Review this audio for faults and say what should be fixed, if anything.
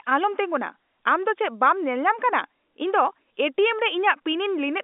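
Nothing to fix: the speech is carried over an ordinary G.711 A-law telephone path at 64 kbps, and its 250 Hz to 3.6 kHz line band with nothing above 4 kHz is simply what that coding does.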